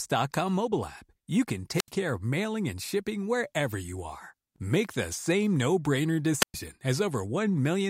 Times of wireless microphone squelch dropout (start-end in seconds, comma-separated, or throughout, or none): 1.75-1.90, 6.40-6.54